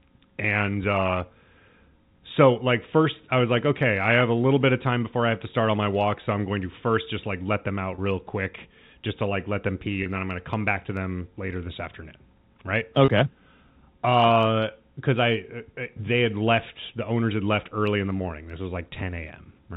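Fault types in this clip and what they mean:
packet loss with pitch repetition: three 30 ms packet losses were bridged by repeating the last pitch period, leaving brief buzzy held sounds at 7.95, 10.03 and 13.05 s.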